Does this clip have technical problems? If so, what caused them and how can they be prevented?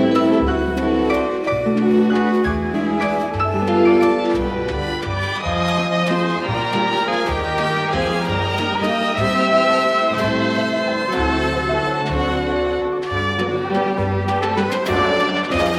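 Yes. Compressed frames are skipped at 2.73, 7.07, 8.74 and 13.97 s. Each time the sound jumps ahead by roughly 150 ms (about 70 ms at 8.74 s), which fits whole 26.1 ms frames that were lost or rejected by the decoder. Prevent it by verifying file integrity with checksums and using reliable transfer and storage.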